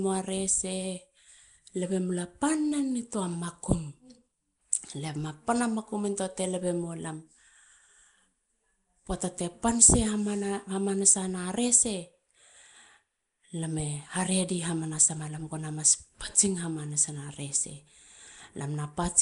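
Throughout, the speech has a rough, hissy halo and a smeared, underwater blur, with nothing above 10.6 kHz. The likely cause is Nellymoser compression at a rate that fits 44 kbps: bands starved of bits are filled with noise.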